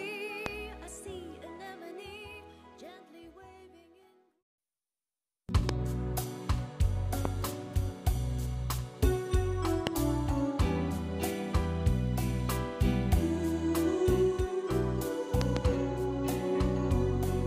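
Loud pops break through the audio at 0.46–0.48, 5.69–5.71, 7.25–7.27 and 9.87–9.89 s, with a double pop at 15.41–15.59 s, about 20 dB above the signal (somewhat less at 7.25 s), likely from voltage spikes such as plugging, switching or static, while the sound continues underneath.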